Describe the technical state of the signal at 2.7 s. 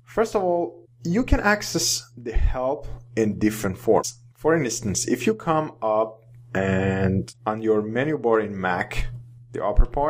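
At 2.7 s the signal is intact, with no fault audible at that moment.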